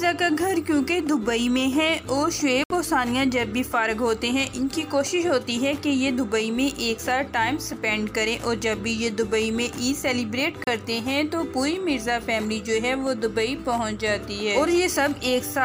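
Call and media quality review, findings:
Digital broadcast dropout, 2.64–2.71 s: audio mutes for about 70 ms, then resumes further along the programme. The receiver lost sync or rejected corrupted frames and muted until valid data returned. The gap fits two dropped frames of about 32 ms each.

Digital broadcast dropout, 10.64–10.68 s: a shorter mute, about 36 ms, with the same cut-and-resume behaviour. It is consistent with a single failed frame. Content in both gaps is unrecoverable.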